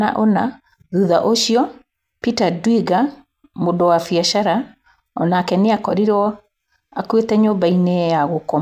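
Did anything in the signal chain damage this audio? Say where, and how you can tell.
No, nothing in the signal chain stood out as damaging this speech when I listened to it.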